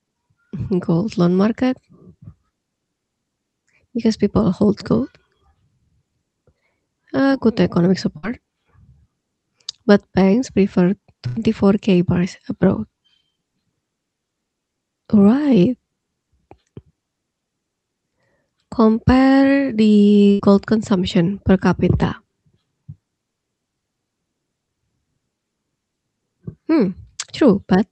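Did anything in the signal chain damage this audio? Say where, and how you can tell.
Yes: a burst of packet loss on the network, after "good economic" at 8.17 s, after "banks prefer" at 11.27 s, and before "gold consumption per capita" at 20.31 s. Over each 56 to 93 ms gap the receiver held and faded the last sound, then jumped ahead, dropping that stretch of speech.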